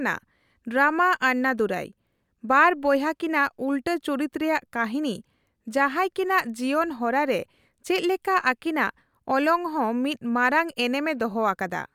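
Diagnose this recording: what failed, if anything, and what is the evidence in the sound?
Nothing failed in this recording. There is no audible evidence of a breakdown at any stage of the chain.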